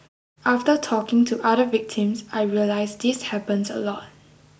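No technical faults are audible.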